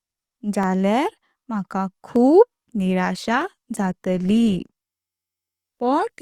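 Sharp single clicks at 0.63 and 2.16 s are likely dropped samples. A fraction of a millisecond vanishes, so the waveform steps abruptly and a thin vertical line cuts across the spectrogram. From 3.24 s to the end, the speech suddenly shows more codec artefacts, with no gap. That is an adaptive stream at a lower bitrate, consistent with a switch from 64 to 24 kbit/s Opus. Identical clicks return at 3.41 and 4.29 s.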